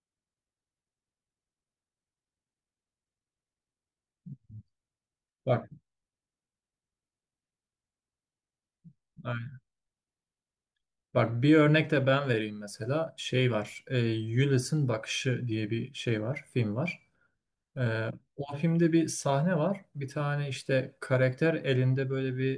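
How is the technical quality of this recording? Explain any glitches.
Nothing in the recording stands out as a technical fault, so there are no glitches to explain.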